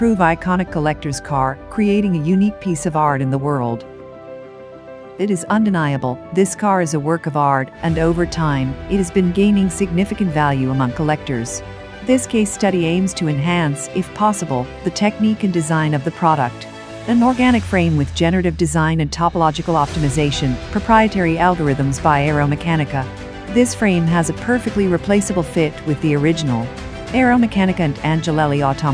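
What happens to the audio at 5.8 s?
Nothing happens to the audio at 5.8 s: it plays through that moment cleanly, with no dropout, click, distortion or other fault to be heard.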